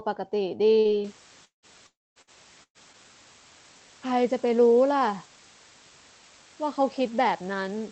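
At 0.79 to 0.88 s a burst of packet loss occurs: the last sound is stretched and faded for about 55 ms, then the speech resumes with roughly 60 ms skipped.

From 1.04 s to the end, low bit depth with dither adds a constant, even hiss about 25 dB below the speech, which fits roughly 6-bit quantisation.

At 1.45 to 1.66 s and 1.87 to 2.19 s, concealment fades into silence lasting about 110 ms and 220 ms. These are likely long network dropouts, losing about 180 ms and 300 ms of speech.

Further bursts of packet loss at 2.22 to 2.30 s and 2.63 to 2.78 s drop about 60 ms and 120 ms. The second ends in roughly 60 ms of silence.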